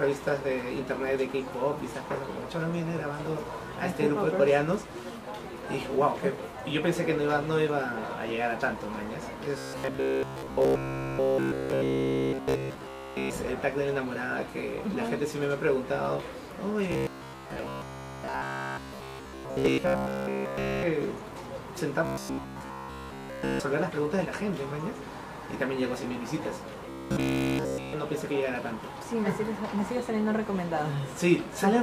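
Robotic sound from repeated short buffers occurs at 9.59–13.33 s, 16.92–20.83 s, 22.05–23.60 s and 26.90–27.93 s. It is a rigid, metallic 66.7 Hz buzz that fills each span entirely, likely from a 15 ms buffer being looped instead of fresh audio, with a fixed pitch rather than dropouts' silent gaps.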